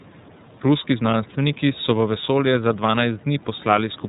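From start to finish the speech sounds boxed-in and dull, with nothing above 4 kHz, and carries a plainly audible rough, slightly synthetic edge. This is iLBC codec damage: the narrowband coder rebuilds each frame's excitation on its own, without drawing on the previous frame, and the roughness fits its 30 ms frame mode at 13.33 kbps. The faint room noise, about 27 dB below the speech, passes through the same band-limited, coarsened rendering.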